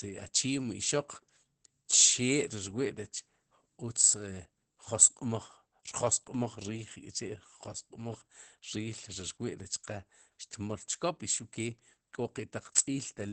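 From start to finish the speech sounds muffled and hoarse, with a faintly robotic edge and nothing above about 8.6 kHz, so sibilants lose their sparkle. This is Opus voice compression running in its SILK linear-prediction mode at wideband: the band has been cut near 8 kHz and the excitation coded coarsely, which fits a low bitrate around 12 kbps. The codec damage is plainly audible throughout.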